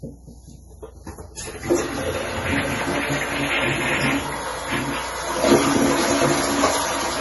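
From start to finish the audio has a hard ceiling at 11.5 kHz, above which nothing remains, and the sound is heavily degraded: watery and swirling, with smeared attacks. This is likely MP3 compression at a low rate, consistent with about 32 kbps. Starved of bits, the encoder drops the treble and zeroes weak frequency lines frame by frame. On a spectrogram this appears as a flat cutoff edge, with speckled holes flickering below it.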